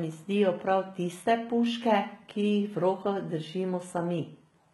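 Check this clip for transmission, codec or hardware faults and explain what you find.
There's one problem, running the whole way through: HE-AAC compression damage, and it's heavy. Nothing comes through above about 11.8 kHz, and the treble sounds rebuilt rather than captured. The likely cause is low-rate HE-AAC with band replication copying lower bands upward, so sibilants turn gritty and metallic, which fits roughly 16 kbps.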